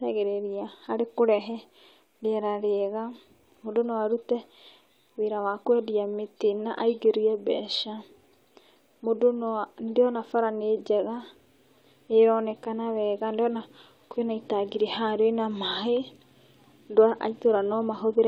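No technical faults can be heard anywhere in this recording.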